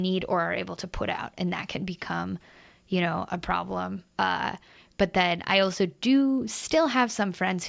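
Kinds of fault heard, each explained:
No technical fault can be heard anywhere in the speech. There is nothing to list here.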